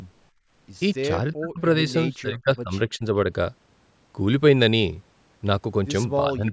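From 0.31 to 0.51 s, the background is gated by the echo canceller. The room sound drops by about 22 dB for a fifth of a second. The canceller heard the loudspeaker and pulled the microphone down hard, then released it.

The speech itself dips four times: 1.35 to 1.6 s, 2.15 to 2.73 s, 2.96 to 3.04 s, and from 6.27 s to the end. The first two drops are deep, almost cutting the speech away. The third is a brief, shallower dip. The last is slight. This is likely speech suppressed in double talk. The canceller could not tell the near talker from the far-end echo and turned both down.

The band stops at 8 kHz, as expected from call microphone processing.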